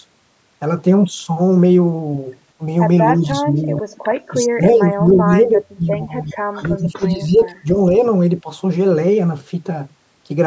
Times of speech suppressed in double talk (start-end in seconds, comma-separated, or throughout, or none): 3.16-3.93, 4.30-7.95, 8.43-8.48